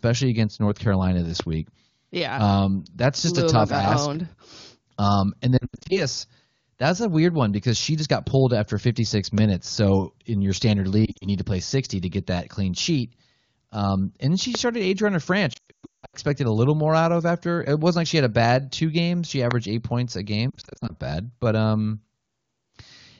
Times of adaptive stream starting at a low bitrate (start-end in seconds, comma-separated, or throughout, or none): none